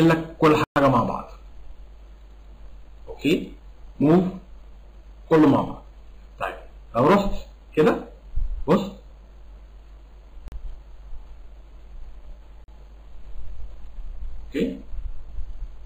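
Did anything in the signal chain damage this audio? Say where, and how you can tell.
Yes. The damage points to the driver or buffer stage, with three blocks of digital silence. The output was fed zeros in place of the audio, either because the buffer wasn't refilled in time or because a calculation produced invalid values. The sound cuts out with no fade from 0.64 to 0.76 s (120 ms), then for 40 ms each at 10.48 to 10.52 s and 12.64 to 12.68 s, and returns just as abruptly, leaving short holes.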